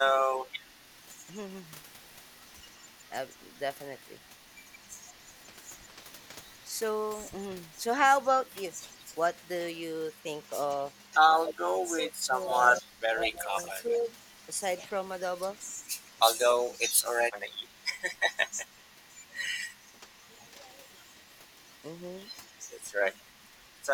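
From 0.12 to 0.65 s the speech dips slightly, about 5 dB in short patches. That's likely speech suppressed in double talk, with the canceller ducking this talker while the far side also speaks.

From 1.16 to 19.35 s there's an echo leak: a faint copy about 30 dB down, trailing by 174 ms. It's likely loudspeaker pickup that the far end's canceller didn't fully remove.

Inside that stretch, from 11.39 to 16.75 s, the suppression hits harder, with drops near 25 dB adding up to about two seconds. It comes back lightly, around 5 dB, from 19.93 to 20.67 s.

The echo returns fainter from 22.52 to 23.86 s, about 40 dB down at 190 ms.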